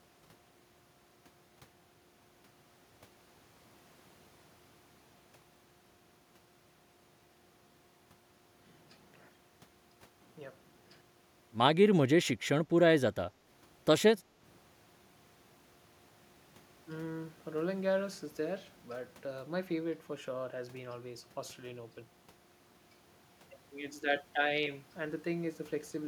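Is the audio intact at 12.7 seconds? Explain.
No. From 12.69 to 12.75 s there is speech suppressed in double talk. With both sides likely talking at once, the echo canceller mistook this talker for loudspeaker echo and turned it down, so the speech briefly dips by up to about 10 dB.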